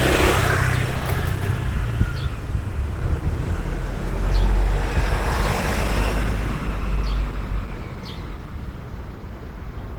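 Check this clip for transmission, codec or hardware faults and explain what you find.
There's one fault, and it runs the whole way through: Opus compression, likely at a low rate since the grain points to something around 16 kbps. At that budget the encoder sits in its hybrid mode, with the speech-oriented layer handling the lower band and coarse band energies covering the top. The sound comes out plainly damaged, muffled and hoarse with a rough, grainy texture, even though the bandwidth stays full, reaching about 20.2 kHz.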